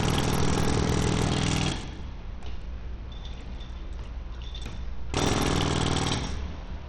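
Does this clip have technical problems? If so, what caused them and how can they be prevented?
Yes. Throughout, the treble is gritty and unstable, with nothing above 18.3 kHz, consistent with heavy Bluetooth SBC compression, likely at a low bitrate near 80 kbps, where coarsely quantised sub-bands starve the top range. Prevent it by using a higher bitpool or a better codec.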